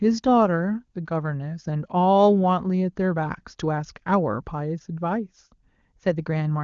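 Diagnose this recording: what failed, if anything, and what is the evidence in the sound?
Nothing here has failed: the speech comes through the AMR wideband (HD Voice) stage sounding clear and natural, the way that codec does when it runs at one of its higher rates.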